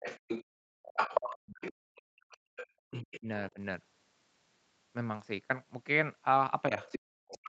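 Speech suppressed in double talk at 0.00 to 0.05 s: the talker's voice drops sharply, by roughly 30 dB, for a brief instant. The likely cause is an echo canceller that cannot separate the talker from incoming loudspeaker sound while both sides speak, so it turns everything down.

Other side's voice leaking through from 0.03 to 3.19 s: a second voice sits underneath, around 10 dB below the talker. It is likely loudspeaker playback that the echo canceller failed to remove fully from the microphone, so the far end carries on in the background.

Background gated by the echo canceller at 0.44 to 0.83 s and again at 1.73 to 2.52 s: the room sound falls away by about 36 dB, then comes back. The canceller clamped the microphone hard while the loudspeaker was active, leaving holes in the ambience until it released.

Speech suppressed in double talk returns at 2.80 to 3.58 s, with the voice dipping by around 40 dB for roughly a third of a second in total. 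It comes back at 6.69 to 7.48 s, running to the end of the clip, with similarly deep dips. Over that last stretch, from 6.76 s, the other side's voice leaking through reappears at about 10 dB under the talker. The talker is being pushed down while the far end creeps in.

Across the whole clip, the Opus call path limits everything to 8 kHz.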